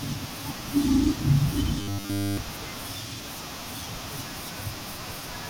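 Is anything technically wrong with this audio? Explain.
Yes. From 1.80 to 2.38 s the speech turns into a rigid metallic buzz at 100 Hz, robotic sound from repeated short buffers, likely a roughly 10 ms chunk looping constantly.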